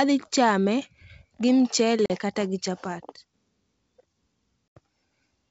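At 2.06 to 2.11 s and 4.77 to 4.79 s, packet loss on an ADPCM call leaves hard-edged silent holes. Unlike smoothed-over concealment, each is followed by slightly distorted speech as the predictor resynchronises.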